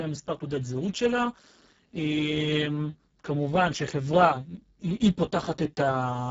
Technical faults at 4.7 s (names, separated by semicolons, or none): Speex codec